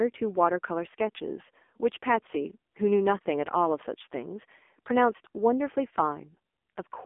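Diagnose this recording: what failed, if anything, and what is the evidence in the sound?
AMR narrowband mobile codec throughout, codec stage: nothing above 3.7 kHz, and heavily buzzy, synthetic pulse-modelled speech that fits a low rate near 6.7 kbps.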